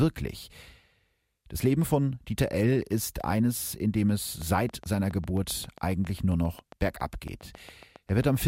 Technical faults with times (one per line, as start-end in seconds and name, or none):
4.42-8.37 train of clicks